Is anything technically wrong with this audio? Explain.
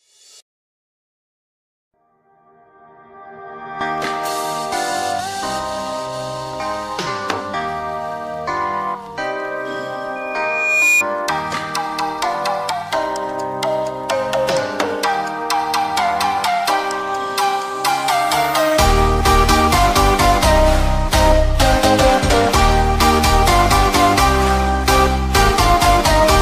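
Yes. From 10.15 s to 11.04 s there is a loudspeaker feedback squeal, a single tone at 2.4 kHz that swells over roughly the first 0.7 s until it sits about 5 dB above the rest of the sound. A microphone is picking up the loudspeaker it drives, and at that frequency the loop gain passes one, so the tone feeds on itself. Unlike a steady interference whine, it grows from nothing.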